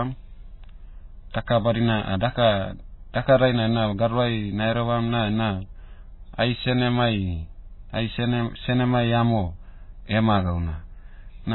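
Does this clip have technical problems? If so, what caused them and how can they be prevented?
Yes. Throughout the speech there is nothing above 4 kHz, so sibilants and consonant detail are dull and muffled, and the remaining band has a watery, swirling quality. This is likely heavy MP3 compression, at a bitrate so low it fits about 16 kbps. Starved of bits, the encoder cut the treble at a fixed frequency and discarded weak spectral components, which flicker in and out from frame to frame. To prevent it, encode at a much higher bitrate, or use a lossless or speech-optimised codec.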